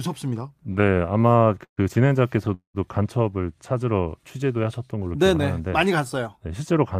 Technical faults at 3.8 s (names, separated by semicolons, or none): none